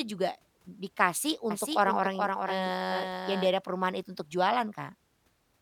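Between 1.51 s and 3.51 s the speech is likely being captured twice, with a second, slower path or an out-of-step edit feeding a duplicate into the mix. The result is a doubled audio track: a full-band copy trailing roughly 0.4 s behind, around 5 dB quieter than the original. It carries no reverberant tail or room colouring, so it sounds like a distinct second voice track, and it cuts in and drops out abruptly at both ends.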